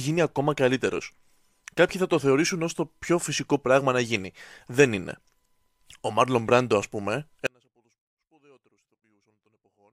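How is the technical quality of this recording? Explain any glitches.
The recording has one clear glitch, an audio dropout to a faint residue near the end. At 7.47 s, right after "α πούμε", the speech cuts off abruptly and only a faint sound remains, roughly 40 dB below normal, to the end. The likely cause is a signal loss while the downstream path stayed live.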